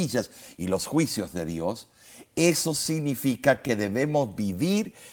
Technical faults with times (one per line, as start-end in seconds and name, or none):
3.11-4.28 repeated stalls (stutter)